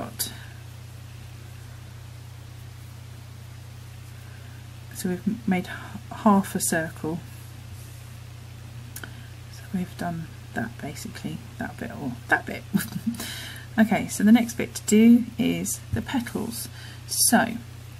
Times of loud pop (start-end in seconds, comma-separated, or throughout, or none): none